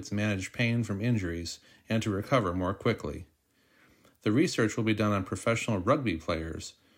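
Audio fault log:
Nothing stood out on listening to the speech in this recording.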